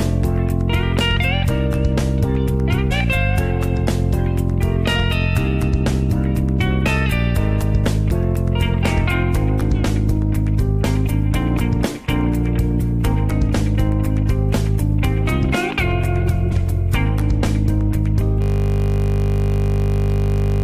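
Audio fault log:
2.90, 12.80–12.82 and 16.51 s, damaged data in a compressed stream: corrupted bytes make the decoder misread frames, lose sync and hunt for the next header. Each event is a brief chirp or blip. A spectrogram shows a thin broadband vertical smear, with a small discontinuity in the waveform.
18.42 s to end, system hang loop: the system froze while the sound hardware kept replaying one 20 ms buffer, over a hundred times, giving a steady 50 Hz buzz. The waveform shows one identical segment tiled exactly, and the spectrogram shows harmonic lines spaced 50 Hz apart.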